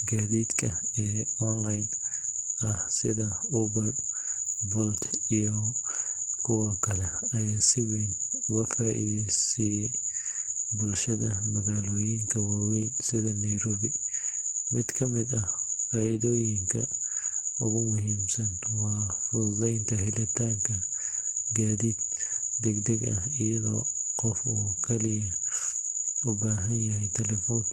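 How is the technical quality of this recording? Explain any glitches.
The technical quality is reduced by plainly audible codec damage across the whole clip. The speech has the muffled, hoarse, grainy character of Opus compression at a low rate.

Opus compression, throughout: The sound points to Opus in its hybrid speech mode, at a rate that fits around 16 kbps. It is likely encoded that way. Band energies are kept but sparsely coded, so the speech turns rough and hoarse rather than hollow. Unlike MP3, there is little swirling or warbling from spectral holes.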